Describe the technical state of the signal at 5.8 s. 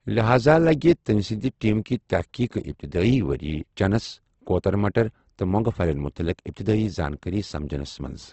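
At 5.8 s the speech carries the same damage heard through the whole clip, most likely from Opus compression: nothing reaches above 8.2 kHz, and the upper bands sound grainy and rough, as if filled with noise rather than left empty. That band filling is what separates it from MP3 damage, which leaves spectral holes and a swirling, watery texture. The roughness points to the codec's music mode running short of bits, at a rate near 16 kbps.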